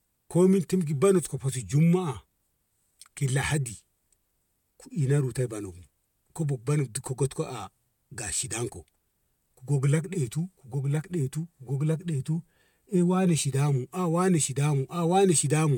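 A speech recording with no audible technical faults: the signal stays continuous and steady throughout, with nothing in it that points to a problem in recording, processing or transmission.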